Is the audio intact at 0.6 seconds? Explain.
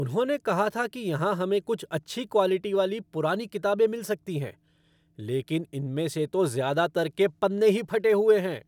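Yes, the speech at 0.6 seconds plays through cleanly, with no dropout, click, distortion or other fault to be heard at that moment.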